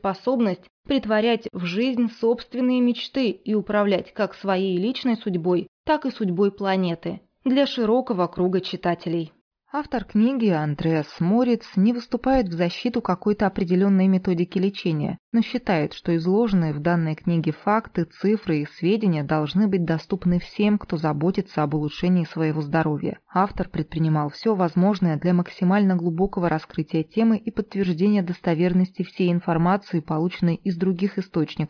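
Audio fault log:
No faults detected; nothing to log.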